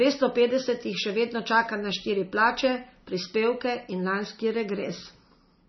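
Speech runs through heavy MP3 compression for the whole clip. Nothing is left above 5.9 kHz, and the remaining sound has a watery, swirling texture as weak frequency components flicker on and off between frames. That flicker sets it apart from a plain low-pass filter, which would only dull the treble. The damage fits a bitrate around 24 kbps, likely too few bits for the encoder to keep the upper band.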